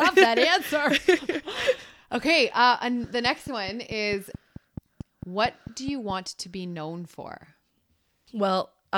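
From 3.04 to 6.11 s, between "okay uh and" and "to be known for", a train of clicks ticks along over the speech at a steady 4.6 per second, about fifteen of them, each much the same shape and poking up to roughly 5 dB above the talker. They keep coming through the gaps as well, so they aren't tied to the voice. That regular, mechanical pacing most likely comes from interference picked up from nearby equipment or a faulty connection or power supply.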